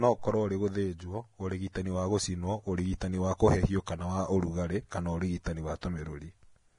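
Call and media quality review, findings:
Vorbis compression, throughout the speech: hissy, grainy treble, roughened tones, nothing above 10.6 kHz. Heavy damage, likely a low-quality Vorbis encode; the coarse treble quantisation turns fine detail into noise and fits a rate near 31 kbps.

Pre-echo at 3.86 s (14 ms), after "gũcinwo ũrigitani wa kũhehio", before "kana wa ũrugarĩ kana"; 5.44 to 5.46 s (23 ms), after "kana wa ũrugarĩ kana"; 5.81 s (19 ms). Short hiss ahead of sharp onsets. Block-spread quantisation noise leaks into the quiet before each attack.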